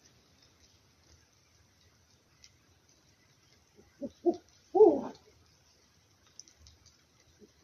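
Nothing goes wrong here at any point; there's simply no technical fault to pick out anywhere along the way.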